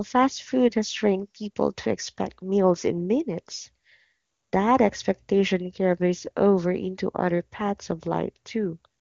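No faults are audible in the speech, and the HD Voice band-limiting fits AMR wideband coding at its top rate of about 24 kbit/s.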